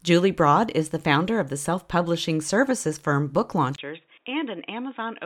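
At 3.76 s the speech drops out for about 20 ms, then returns duller, quieter and band-limited to 3.8 kHz with faint background noise, likely an input switched to a poorer device.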